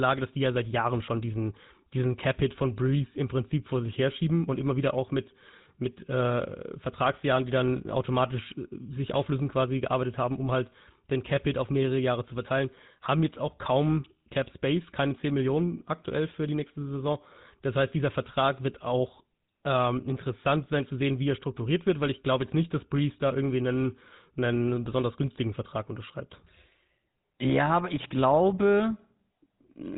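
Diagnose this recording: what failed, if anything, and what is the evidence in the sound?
GSM full-rate codec damage runs throughout the speech, a fault at the codec stage. The band stops near 3.9 kHz, and a buzzy, gravelly roughness comes from pulse-driven vocal-tract modelling, which fits the 13 kbps GSM full-rate coder.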